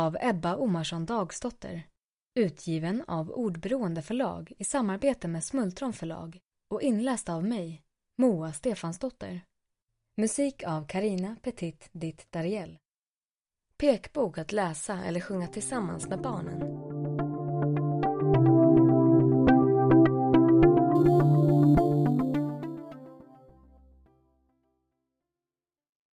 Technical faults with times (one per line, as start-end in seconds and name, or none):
20.95-26.18 imaging from sample-and-hold upsampling